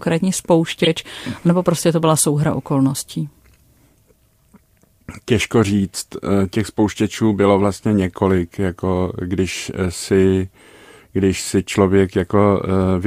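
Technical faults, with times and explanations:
0.84–0.87 s, corrupt frame decoded: a short, harsh burst cuts in just before "nebo prostě to byla". Damaged bits in a couple of compressed frames were decoded anyway, so misread gains and codes sprayed energy into the wrong frequencies for those frames' length.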